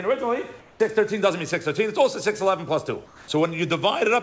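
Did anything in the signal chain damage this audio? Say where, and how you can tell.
Yes, at the call-processing stage: comfort noise in place of the background, from 0.60 to 0.80 s and from 3.06 to 3.28 s. The quiet background, about 29 and 26 dB below the loud parts, turns into steady, featureless hiss about 4 dB lower. Unlike a gate or dropout, the gap is filled rather than silent, which likely points to discontinuous transmission with synthetic noise. Above 8 kHz there is nothing in the clip.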